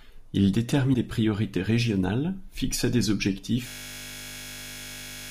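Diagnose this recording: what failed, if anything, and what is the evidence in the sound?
Broken MP3 bit reservoir, codec stage, likely, at 0.93 to 0.96 s: a brief disruption as the audio jumps ahead, with frames after a cut decoding from another frame's borrowed bytes.

System hang loop, driver or buffer stage, from 3.68 s to the end: one 20 ms slice repeats about 80 times, a steady 50 Hz buzz from a frozen ring buffer.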